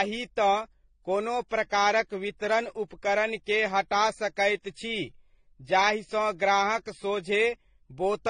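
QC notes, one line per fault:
Throughout: transcoding between lossy codecs. The speech has nothing above 9.7 kHz, and the different kinds of coding damage from each stage are heard together. The likely cause is a chain of roughly 48 kbit/s MP3, then 24 kbit/s HE-AAC, then 32 kbit/s AAC-LC. Each later stage spends bits re-encoding the earlier artefacts, and the lowest bandwidth limit is the one that persists.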